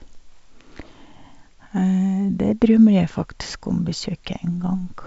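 No technical faults can be heard in the speech, which carries the band-limited character of G.722 wideband telephone coding at 64 kbit/s, with nothing above about 7.7 kHz and coding damage faint at most.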